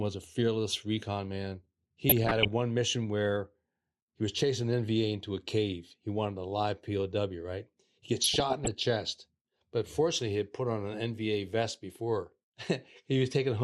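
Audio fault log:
Throughout: MP2 compression. The speech was likely squeezed through an MPEG Layer II encoder at a low rate, consistent with about 80 kbps. Too few bits for its 32 sub-bands switch upper bands off and coarsely quantise the rest, so the speech sounds dull, gurgling and grainy.
2.09–2.52 s and 8.16–8.68 s: DAB burbling. Reception errors, at a rate of a fraction of a percent, slipped past error correction into the audio data, corrupting samples and scale factors. Wrong samples put short blips of noise into single sub-bands. The first burst comes after "a fearless recon man" and ends just before "mission where". The second ends just before "chest but fortunately he".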